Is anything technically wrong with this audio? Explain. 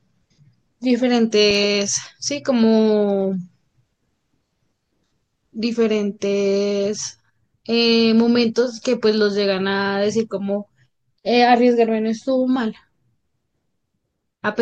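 No, this speech recording shows no technical faults; the signal is continuous and stable throughout, with nothing wrong to point to in how it was captured or delivered.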